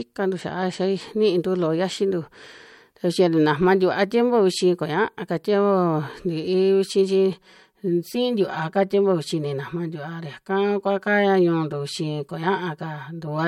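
From about 7.33 s right through to the end, the speech picks up a hollow, phasey quality, and that's channel delay (comb filtering). One side is arriving roughly 5 ms behind the other, and once the two get folded to mono, whatever they share cancels at evenly spaced frequencies. With a lag around that size, the first notch lands somewhere near 100 Hz, with more following up the spectrum, so the voice sounds thinned and a bit tubey.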